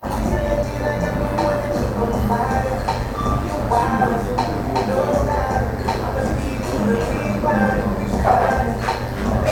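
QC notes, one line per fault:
Throughout, overlap-add ripple: the level pulses by about 6 dB at around 100 Hz, once per frame, because overlapping windowed frames do not sum to constant gain. The result is a metallic buzz with extra tones around each note, locked to a steady frame rate, not an added hum tone.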